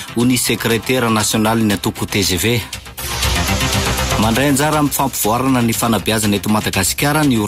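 No technical faults can be heard anywhere in the audio: the signal stays continuous and stable throughout, with nothing disturbing its level, timing or tone.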